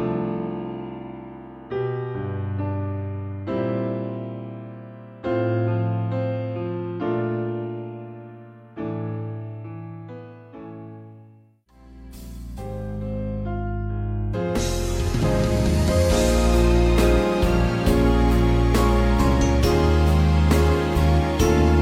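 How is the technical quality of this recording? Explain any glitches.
The technical quality of this recording is good, and there are no glitches to explain.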